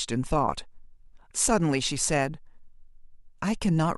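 Nothing to flag here; there's no technical fault to be heard anywhere in the speech.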